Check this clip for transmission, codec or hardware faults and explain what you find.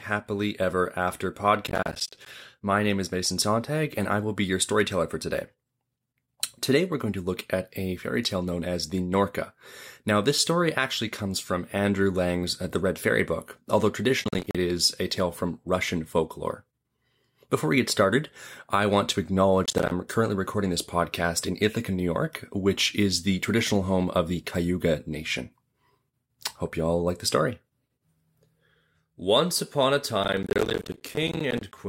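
Processor overload crackle affects this speech clip in four bursts: 1.67–2.26 s, 14.24–14.55 s just before "is a tale from", 19.64–19.91 s between "started I want to" and "currently recording this podcast", and 30.24–31.78 s after "upon a". In each burst the processor misses its deadlines for many short buffers of roughly 10 ms in a row and drops silence into each gap. The hard-edged holes stack into a gritty, tearing crackle. Clipping distortion would instead follow loudness, and a network dropout would be a single longer gap, not this rapid chain of tiny ones.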